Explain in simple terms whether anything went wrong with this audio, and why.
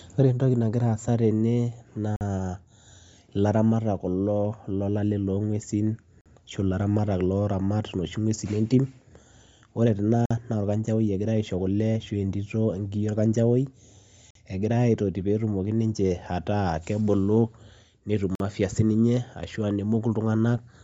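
Two things went wrong. Throughout the speech there is a grainy, breathy edge. That is most likely Bluetooth LC3 compression, a codec that discards much of the high-frequency detail and fills it in with noise, leaving plainly audible damage.

There are also gaps between chunks. The sound cuts out abruptly for about 48 ms at 2.16, 6.21, 10.26, 14.31 and 18.35 s, once every 4 seconds. The audio was delivered in 4-second pieces, and a short silence was left at each join.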